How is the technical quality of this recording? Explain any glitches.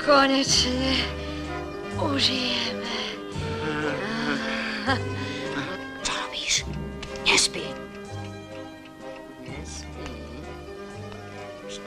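Nothing in the recording stood out as a technical problem on listening.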